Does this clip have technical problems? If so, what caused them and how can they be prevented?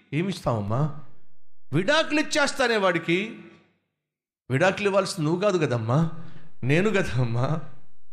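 Yes. The speech carries two DC steps: the waveform's zero line jumps by about -32 dBFS at 0.68 s and returns at 2.60 s, then jumps by about -30 dBFS at 6.03 s and holds to the end. Each jump sounds like a low thump under unchanged speech. To prevent this, AC-couple or high-pass the input and avoid converter recalibration or switching offset-carrying inputs during recording.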